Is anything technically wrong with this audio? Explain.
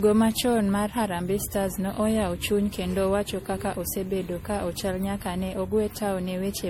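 Yes, there's generation loss throughout the speech: swirly, hollow and smeared, with blurred attacks, likely from around seven passes through an MP3 encoder at what sounds like 64 kbit/s.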